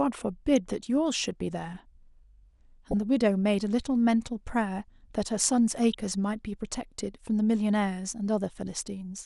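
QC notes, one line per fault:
throughout: MP2 compression. The likely cause is a low-rate MPEG Layer II encode, fitting about 80 kbps, which starves the upper sub-bands of bits so they drop out and flicker. The speech sounds plainly dull, with a granular, gurgling roughness from coarse quantisation.
0.56–0.85 s, 2.91–3.03 s, 5.93–5.99 s: DAB burbling. Bit errors at a fraction of a percent slip past error correction into the MP2 data, corrupting samples, which put short blips of noise in single sub-bands.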